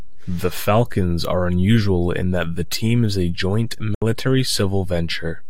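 At 3.95 s, just after "team is a joint", the speech cuts to silence until 4.02 s. This is a Bluetooth dropout, likely from packets arriving too late for the headphones. About 70 ms goes missing, which fits roughly three lost packets. Sound resumes mid-stream, as if it had kept playing.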